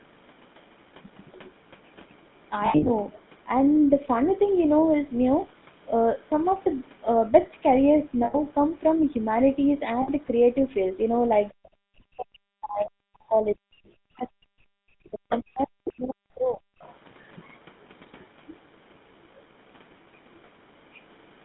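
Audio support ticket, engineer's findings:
Codec: GSM full-rate codec audible the whole way through. Buzzy, gravelly roughness on the speech, with the band sitting roughly 150 Hz to 3.6 kHz. The pulse-driven vocal-tract model throws away most of the excitation detail, which fits a 13 kbps full-rate stream. The damage is plainly audible, not subtle.

Lost GSM frames, 2.66–2.91 s: about 180 ms missing in bursts spread across 240 ms. The longest gap is around 70 ms. Metallic ringing where the decoder repeats the last good frame and lets it fade.
Same concealment ring at 8.24–8.35 s (100 ms) and 10.02–10.10 s (60 ms). It's short enough that the held sound never quite fades out.

Speech suppressed in double talk, 11.54–11.70 s: a brief dip of roughly 40 dB. Echo canceller likely ducking the near end while both sides talk.
Then 11.97–16.64 s: the talker drops out in pieces, about 4 s affected in total, with dips of similar depth. 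Same suppressor clamping against the far-end signal.

Other side's voice leaking through: scraps at 15.30 s (about 20 dB under the speech), 15.85 s (about 10 dB under) and 16.82 s (about 30 dB under). Loudspeaker echo likely getting past the canceller into the mic. The 15.85 s one is the loudest.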